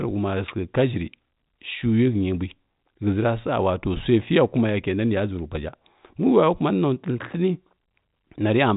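Speech with no technical faults to report. It has the narrow band of fixed-line G.711 telephone coding, with nothing above about 3.8 kHz, which fits A-law at 64 kbps.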